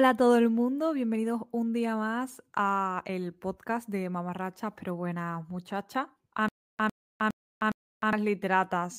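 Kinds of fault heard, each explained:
Stutter with silent gaps: from 6.48 to 8.13 s a 105 ms fragment of speech repeats four times, each followed by 305 ms of digital silence, a steady 411 ms cycle. A stalled stream likely replayed its last piece at each retry, losing the speech in between.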